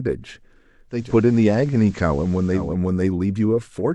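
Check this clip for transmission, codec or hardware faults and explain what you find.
Digital radio blending to analogue occurs from 0.88 s to 2.77 s. The receiver lost the digital stream and cross-faded over 255 ms to the station's FM broadcast, so the speech carries faint hiss. That hiss distinguishes it from a codec bandwidth drop.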